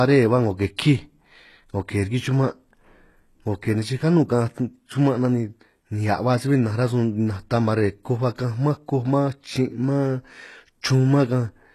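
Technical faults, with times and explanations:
Throughout, HE-AAC compression: the treble was likely resynthesised by spectral band replication at a rate that fits about 16 kbps, with upper bands copied from lower ones and misaligned harmonics. Sibilants sound plainly gritty and lispy, and nothing sounds above 12.3 kHz.
0.77 s, pre-echo: a sharp attack fell late in a transform block, so quantisation noise scaled for the loud onset spread into the quiet moment before it. A short hiss of about 18 ms precedes the attack, which sounds softened and smeared.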